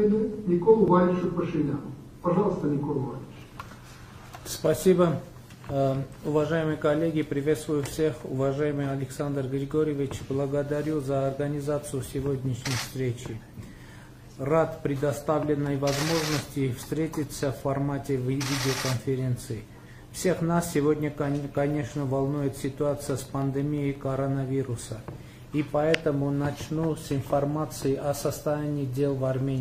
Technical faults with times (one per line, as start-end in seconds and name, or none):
22.89-24.15 train of clicks